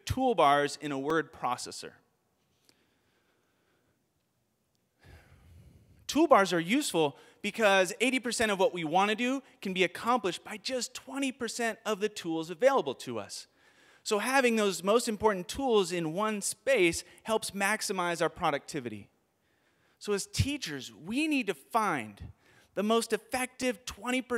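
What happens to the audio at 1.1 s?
At 1.10 s the audio drops into a block of digital silence lasting about 2.9 ms. A short run of samples has been replaced by zeros, most likely because the output buffer was not filled in time. The gap's length fits a 128-sample buffer. The sound cuts to zero and back with no fade. Both edges land almost together, so the hole is too brief to hear as a gap. It comes across as a single sharp tick.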